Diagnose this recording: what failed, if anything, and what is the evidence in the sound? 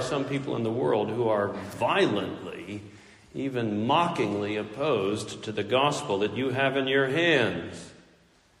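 The codec stage is the likely culprit: MP3 compression damage runs through the whole clip, with a watery, swirling texture and smeared attacks that point to a starved bitrate near 64 kbps. A spectrogram would show weak bands flickering on and off between frames.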